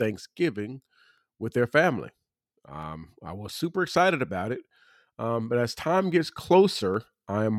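A short speech recording carries a regular series of clicks from about 0.35 s to 6.94 s, one roughly every 0.82 s, around ten in all. This pattern points to clock drift buffer slips: the likely cause is two devices running on separate clocks that disagree by something like 200 ppm, so the buffer between them drifts until a handful of samples is dropped or repeated. On a spectrogram each slip shows as a thin vertical broadband line at evenly spaced intervals. On the waveform each one is a step or discontinuity.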